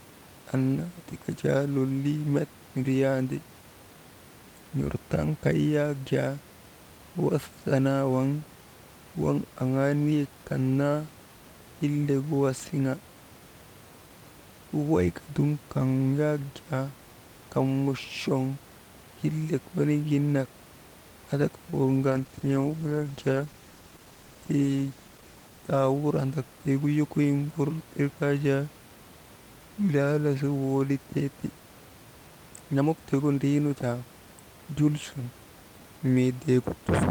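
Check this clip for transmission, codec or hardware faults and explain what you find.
Two transmission faults occur close together in this speech clip: a brief stall from a late packet and, just after it, a drop in the call's bitrate. The room noise, about 23 dB below the speech, is part of the recording and is not a fault.

Short stall from a late packet, 21.70 to 21.74 s: one packet arrived late and the jitter buffer emptied, so the receiver held the last sound for about 23 ms and then resumed exactly where it stopped. Nothing is lost. Unlike a dropout, which leaves a gap, this is a small drawn-out hold, and playback runs about 23 ms later afterwards.

Call bitrate drop, 22.09 to 26.69 s: the bandwidth estimate fell and the encoder went from 64 to 19 kbps, staying at its lowest for about 3.3 s. Coarser coding makes the speech rougher and duller, with the top end trimmed. Packet loss would instead cause discrete glitches; here the degradation is continuous and clears again before the clip ends.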